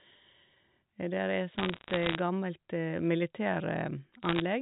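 From 1.58 to 2.19 s, and again from 4.23 to 4.40 s, bit errors on a digital phone line put sharp ticks and crackle over the G.711 speech. Flipped bits, at a rate somewhere under one percent, corrupt individual samples. Hits on high-order bits produce the loudest clicks.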